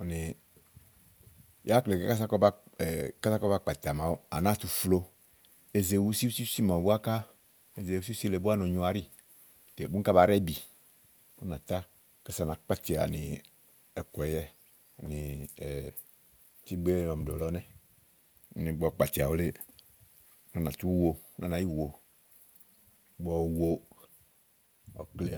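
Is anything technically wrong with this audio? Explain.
No, nothing is technically wrong with this audio.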